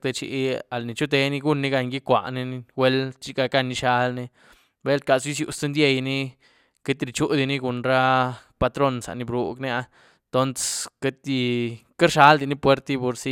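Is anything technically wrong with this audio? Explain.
No, nothing technically wrong can be heard here.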